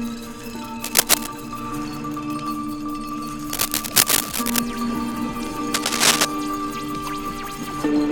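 A music clip with cable scratch noise, likely a worn cable or connector being moved, adds crackling, rustling bursts over the music at 0.84–1.27 s, 3.50–4.59 s and, loudest, 5.74–6.25 s.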